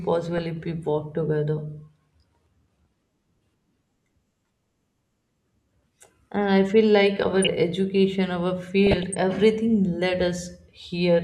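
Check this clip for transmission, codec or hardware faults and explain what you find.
The clip has three bursts of DAB burbling in the speech: 0.38–0.52 s just before "we walk together", 7.22–7.49 s right after "I feel like", and 8.86–9.15 s ahead of "everything led". Bit errors at a fraction of a percent slipped past error correction into the MP2 data. Corrupted samples and scale factors put short noise blips into individual sub-bands and make them jump in level.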